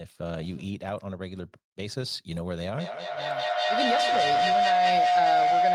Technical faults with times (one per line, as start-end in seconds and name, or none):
2.79-5.75 feedback howl